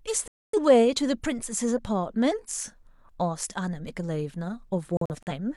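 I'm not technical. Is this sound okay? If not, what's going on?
No. This speech clip has two digital broadcast dropouts, where the receiver briefly lost the digital signal or got damaged data and muted itself until clean data returned. From 0.28 to 0.59 s the sound drops out in one gap of about a quarter of a second. From 4.97 to 5.32 s it breaks into several tiny holes, none longer than about 43 ms. Whatever was said during those gaps is lost.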